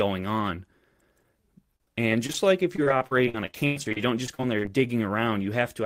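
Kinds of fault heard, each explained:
Repeated packet loss (robotic sound): audio packets kept going missing or arriving late from 1.76 to 4.71 s. Each of more than twenty holes, up to 100 ms long, was patched by extending the preceding sound, leaving the speech choppy with pieces dropped out.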